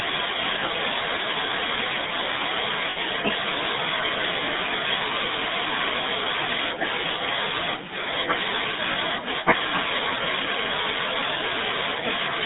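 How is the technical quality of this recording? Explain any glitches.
The recording is low in technical quality. It is speech carried through a narrowband mobile codec, with two brief dropouts.

GSM full-rate codec, throughout: The speech has been squeezed through the original GSM coder. The sound is consistent with its 13 kbps rate. This coder models the vocal tract as a filter and excites it with a sparse, regularly spaced pulse train rather than the real waveform. That gives the plainly audible buzzy, gravelly texture. The band runs only from about 150 Hz to 3.7 kHz, so the speech sounds thin and muffled.

Lost GSM frames, at 2.9 s and 8.92 s: At these two points the decoder received no usable data. It reused the last good frame's parameters to fill the gap. The gaps last about 60 ms and 40 ms, which fits three and two 20 ms frames. Each is heard as a short, rough, metallic ringing smear where the speech briefly freezes. 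Both are too short to fade fully to silence.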